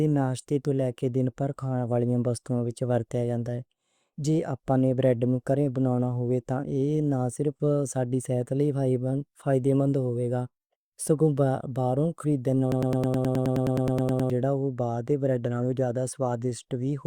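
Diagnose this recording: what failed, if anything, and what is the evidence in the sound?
Broken-record loop from 12.72 to 14.30 s, after "سگوں باروں خریدے": one 105 ms fragment repeats 15 times, likely from a stalled buffer resending its last block.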